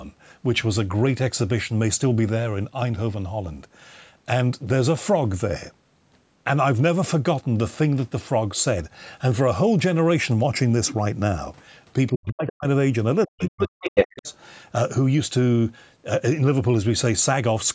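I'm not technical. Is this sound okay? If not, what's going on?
No. Around 12.12 to 12.67 seconds and again from 13.26 to 14.27 seconds, the speech drops almost to nothing or breaks into pieces. This is speech suppressed in double talk: both ends of the call were likely speaking at once, and the call's echo canceller turned the talker down along with the echo.

There is also the other side's voice leaking through. A tiny scrap of another voice slips in at 12.47 to 12.52 seconds, and a longer stretch from 13.42 to 14.33 seconds comes through about as loud as the talker. The other person's voice likely came out of the loudspeaker and back into the microphone, and the echo canceller didn't fully remove it.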